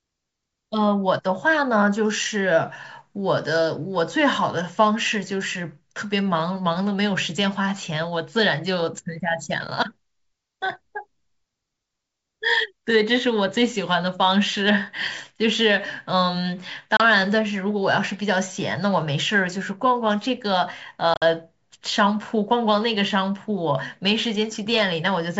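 Speech over what sounds like G.722 wideband telephone coding, clear to about 7 kHz, which fits the 64 kbit/s mode. It has packet loss on an ADPCM call: a 30 ms silent hole at 16.97 s, and 70 ms of dropouts scattered across 21.14–21.23 s, the longest run 50 ms. Each hole is hard-edged, and the decoder's predictor and step size drift from the sender's, so audio resumes slightly distorted before settling.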